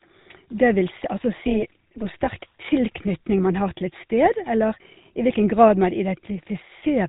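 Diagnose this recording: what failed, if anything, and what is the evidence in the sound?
The codec stage failed. The whole speech clip carries the buzzy, gravelly roughness of the GSM full-rate codec, which fits a 13 kbps stream. The codec rebuilds the voice from a vocal-tract filter driven by coarse, decimated pulses. On a spectrogram, energy stops flat at 3.8 kHz and the harmonics look smeared.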